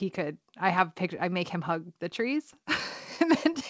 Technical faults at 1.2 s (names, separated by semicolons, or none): clock drift between sender and receiver; repeated timing corrections